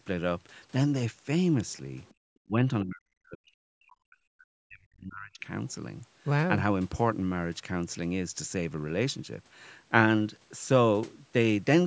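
A speech recording from a call, with the band topping out around 8 kHz as the call's microphone processing would give it, and the trouble is all bunched into the first half. From 2.05 to 2.14 s there's a faint scrap of a second voice, well down under the talker, roughly 35 dB below. That's the other side's voice leaking through, most likely loudspeaker sound the echo canceller didn't fully scrub out of the mic. Right after, from 2.14 to 2.19 s, the room sound falls away by about 25 dB for around 50 ms. That's background gated by the echo canceller: it clamped the mic hard while it thought the loudspeaker was active, then let go, so you get a little hole in the ambience rather than a clean transition. The bigger issue is speech suppressed in double talk, first at 2.47 to 2.59 s, a brief dip of roughly 25 dB lasting about a tenth of a second, and then a long stretch from 2.82 to 5.48 s where the talker gets pushed down by as much as about 40 dB, adding up to something like two seconds of damaged speech. 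The likely story is both ends talking at once, with the canceller unable to tell the near talker from the echo and ducking everything, so the voice drops.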